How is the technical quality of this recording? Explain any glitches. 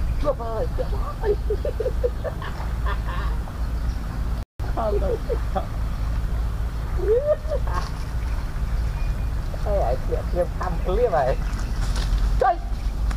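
There is one glitch, a brief dropout. At 4.43 s the sound cuts to silence for about 168 ms, resuming at 4.60 s. This playback stall likely happened because the player ran short of data or its thread was blocked.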